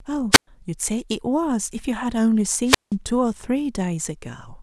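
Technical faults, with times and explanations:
0.31–0.47 s and 2.64–2.94 s, wireless microphone squelch dropout: the radio link fades until the receiver's squelch mutes it, so hiss rises before gaps of near silence lasting 113 ms and 174 ms.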